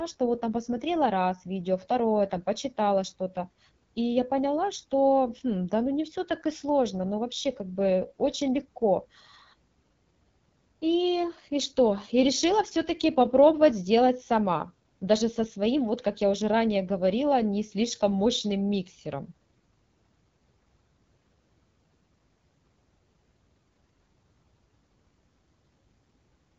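Throughout, the speech has been squeezed through the AMR wideband (HD Voice) codec at a low rate; the plainly audible damage fits its 8.85 kbit/s mode. With so few bits for its pulse-driven vocal tract model, the speech comes out rough and raspy, with nothing above 7.6 kHz.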